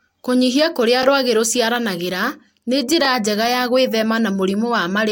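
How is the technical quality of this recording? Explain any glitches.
The recording has one recurring glitch. Overlapping chunks occur at 1.03–1.05 s, just before "rwagĩ rũciaranagĩra nĩ", and at 3.05–3.07 s, right after "kũrĩa rwagĩ rũciaranagĩra nĩ". The audio was handled in 2.0 s blocks, each starting about 21 ms before the previous one ended, so that sliver plays twice at each join and sounds like a brief click or stutter.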